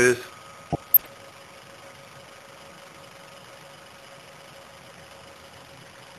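Weak reception let bit errors slip past DAB error correction between 0.70 and 1.06 s, corrupting sub-band levels frame by frame: DAB burbling, short noise blips and sudden sub-band level jumps over the sound.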